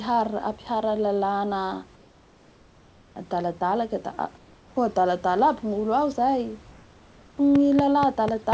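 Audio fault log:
1.96–3.16 s, 4.38–4.76 s and 6.72–7.38 s: comfort noise in place of the background. In each pause the room's detailed background gives way to a steady, featureless hiss about 3 dB quieter. This is likely discontinuous transmission, with the receiver synthesising noise. Unlike a dropout, the gap never falls silent.
7.55–8.53 s: train of clicks. Identical sharp ticks arrive at a regular 4.1 per second, standing well above the sound and continuing through quiet moments. Likely interference or a faulty connection or power supply. The even spacing and matching shape set it apart from random crackle or codec artefacts.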